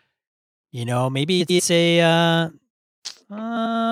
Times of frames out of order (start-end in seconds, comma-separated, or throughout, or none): 1.40-1.60, 3.56-3.75